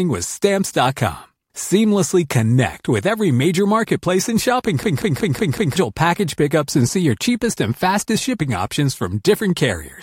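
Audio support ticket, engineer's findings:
Machine-gun stutter 4.83–5.76 s after "major marketplace and shopping": 0.19 s chunk repeats five times. System hang loop; frozen driver, hardware recycling ring buffer, fits an 8192-sample buffer.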